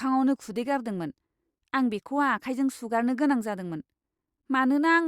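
No technical faults are audible anywhere in it.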